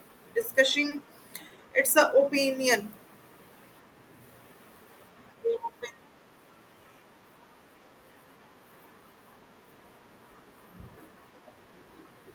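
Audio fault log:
0.89–0.93 s: short stall from a late packet. The jitter buffer ran dry, so the last speech sound was held for 20 ms, then playback resumed from the same point, now 20 ms later. Nothing is missing, unlike packet loss: the sound stretches rather than jumps.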